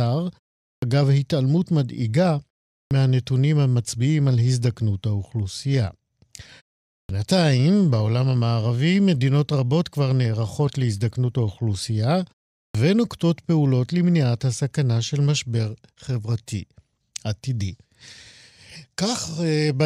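Clipped start after a pause at 0.77, 2.86, 7.04 and 12.69 s. The output needs time to wake after half-second silences, swallowing about 50 to 56 ms of each onset.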